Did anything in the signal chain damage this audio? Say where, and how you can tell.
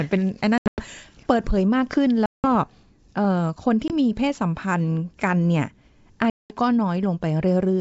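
Yes, packet loss on an ADPCM call, so this is a network-stage fault, with the wideband coding itself sounding clean. Sound drops to hard-edged silence at 0.58–0.82 s (broken into pieces, the longest hole about 100 ms), 2.26–2.46 s, 3.88–3.93 s and 6.30–6.56 s. The gaps point to bursts of roughly ten packets, plus a single one at 3.88 s. After each hole the decoder's predictor and step size no longer match the sender's, so it needs a moment to resync.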